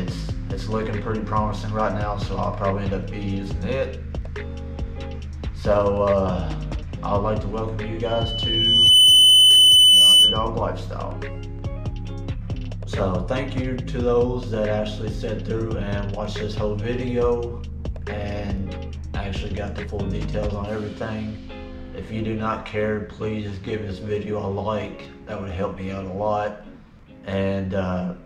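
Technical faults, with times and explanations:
8.05–10.48 s, loudspeaker feedback squeal: a piercing single tone at 3 kHz rises out of the sound, swelling to full strength over roughly a second and then sitting around 15 dB above everything else until it cuts off at 10.48 s. A microphone was picking up the loudspeaker it was feeding, and at 3 kHz the loop gain passed one, so that frequency kept amplifying itself.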